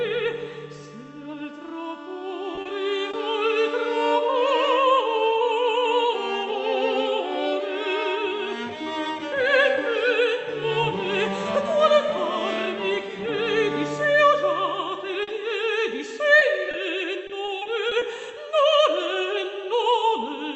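Short concealed packet loss appears at 2.55–2.59 s, 2.61–2.67 s, 3.11–3.15 s, 15.23–15.29 s, 16.39–16.43 s and 16.71–16.75 s. Each hole is 20 or 40 ms, where audio arrived too late for the decoder. The receiver extended the preceding sound and then crossfaded back, so each one is a brief smear or wobble. On a spectrogram, the harmonics run unnaturally flat and smooth for those few hundredths of a second. In the waveform, the envelope looks copied rather than evolving.

Repeated packet loss (robotic sound) follows from 17.27 to 18.03 s. Six gaps, none longer than 20 ms, add up to about 120 ms, so roughly a sixth of that stretch is patched. Because the patches keep recurring before the signal settles, the sound turns choppy. The spectrogram shows a row of short, frozen vertical slices breaking up the texture, and the waveform shows a stuttering, repeated-looking envelope. Throughout, content stops near 8 kHz, which fits the Opus call path's bandwidth.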